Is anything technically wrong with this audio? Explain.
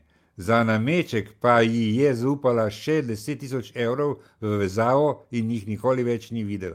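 No, nothing technically wrong can be heard in this speech recording. There is no fault to report anywhere in the clip.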